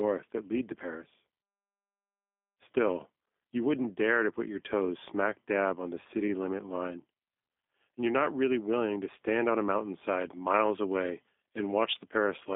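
From start to finish the speech sounds boxed-in, rough and faintly synthetic, with plainly audible codec damage. The sound is confined to a telephone band of roughly 200 Hz to 3.6 kHz, with nothing above 3.7 kHz. That is the G.729 codec, and it fits G.729A at 8 kbit/s. The codec throws the waveform away and rebuilds the speech from a vocal tract filter, a pitch predictor and a few pulses per 10 ms frame, which leaves this coarse character.

From 10.05 s to the end at 12.55 s the sound turns abruptly thin, bright and hissy, with sibilance pushed forward. This is pre-emphasis left on. The treble was boosted along an FM 75 µs curve, by about 14 dB at 10 kHz relative to 1 kHz, and the matching de-emphasis cut was never applied. The remaining upper part of the band is left tilted hard toward the top.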